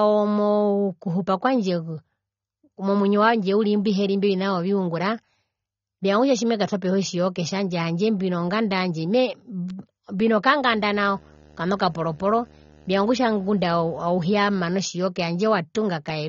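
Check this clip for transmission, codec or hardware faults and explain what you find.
Two faults are present. Throughout, the speech is band-limited with nothing above 6.9 kHz and sounds dull and warbly, likely from AAC compression at a low rate near 24 kbps, where quantisation against a hearing model lowers the cut-off and smears detail. From 10.69 to 14.73 s there is video or display buzz: a 75 Hz field-rate buzz with hash above it, well below the speech, from a screen or video cable coupling into the audio.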